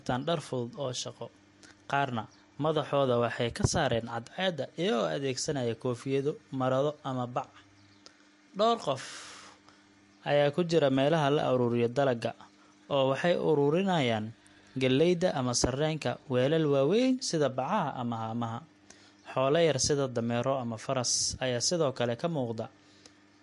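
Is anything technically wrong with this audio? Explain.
Yes. Throughout the speech, likely MP3 compression starving the encoder of bits (consistent with about 48 kbps) removes everything above 11.2 kHz and flickers weak frequency lines, leaving a plainly audible watery swirl.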